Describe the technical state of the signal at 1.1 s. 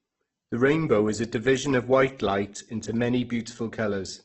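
A single sharp click lands at 1.06 s, just before "is a division of", a thin vertical line through the spectrum. These are likely dropped samples: roughly one sample is missing, so the waveform jumps abruptly between values. The gap is far too brief to remove any sound.

Around that moment the speech also sounds grainy and rough, with nothing above about 8 kHz. That is heavy damage from Opus compression, likely in its CELT music mode at a low bitrate near 12 kbps, where starved bands are filled with folded or noisy content instead of their true detail.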